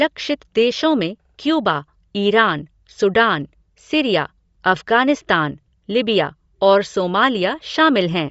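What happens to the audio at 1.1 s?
At 1.1 s the sound carries the same damage it has throughout: a plainly audible breathy, grainy edge, with nothing above 7.7 kHz. This is likely Bluetooth LC3 compression. The transform coder discards much of the upper spectrum and fills the gaps with shaped noise, which produces the grainy edge and the dull top end. The texture fits 10 ms frames at around 32 kbps.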